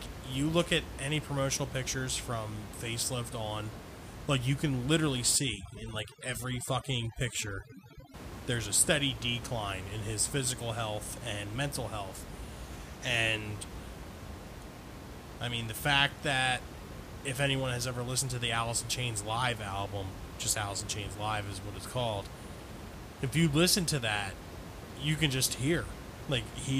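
The clip is speech with room noise about 12 dB below the voice, which belongs to the recording itself. From 5.36 to 8.14 s, between "like you can literally" and "there's a steady decline", there is overdone noise removal: a noise reducer set too strong gates individual frequency bands whenever they sit near its noise estimate. The background falls away and breaks into twinkling, warbling specks. Unlike codec artefacts, this is confined to that stretch, and the room noise is audibly present on either side of it.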